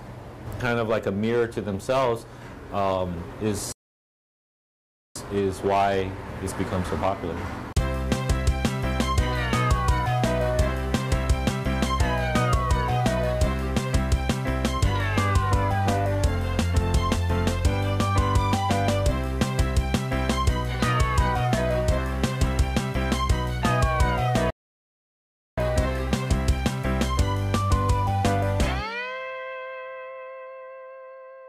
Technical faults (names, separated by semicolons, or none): playback stall